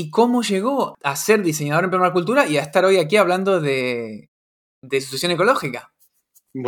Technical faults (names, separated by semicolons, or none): clipped start after a pause